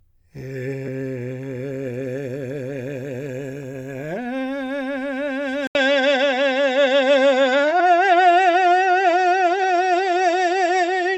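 At 0.86 s the music jumps ahead a little, about 40 ms, where a couple of compressed frames were skipped. At 5.67 s there's a brief 80 ms gap, then everything goes duller, with nothing above 7.8 kHz, a level shift of around 5 dB and faint new hiss. The input likely switched to a poorer device. Bigger skips of roughly 100 ms follow at 7.79 s and 9.63 s.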